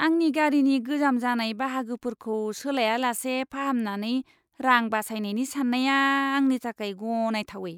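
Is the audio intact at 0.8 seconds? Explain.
Yes, at 0.8 seconds the speech plays through cleanly, with no dropout, click, distortion or other fault at that point.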